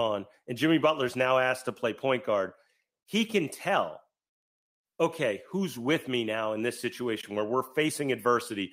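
Nothing is technically wrong with this speech recording.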